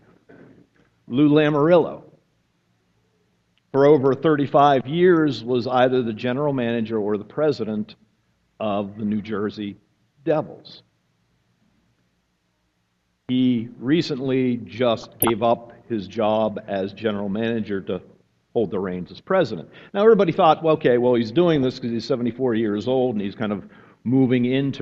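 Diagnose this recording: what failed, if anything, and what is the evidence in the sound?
A bubbling, squelchy burst with brief chirps sits over the sound from 15.01 to 15.31 s, and a shorter, milder one comes at 21.56 to 21.63 s. This is DAB burbling, a fault at the codec stage, where weak reception lets bit errors slip past error correction into the MP2 audio data. Corrupted samples put short blips of noise in single sub-bands, and corrupted scale factors make sub-bands jump in level for up to a frame. The first burst points to roughly a dozen damaged frames at a bit error rate of a few tenths of a percent, and the second to a much lower error rate.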